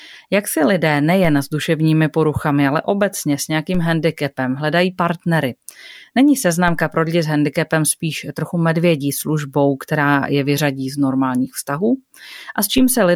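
The waveform's zero line jumps by about -17 dBFS in a DC step at 1.25 s after "si lidé", 3.75 s before "handicapem hledají partnery", 6.68 s before "pro lidi s handicapem", and 12.78 s. Each offset drains away through a 2 Hz high-pass, so every step lands as a brief low thump beneath the continuing speech.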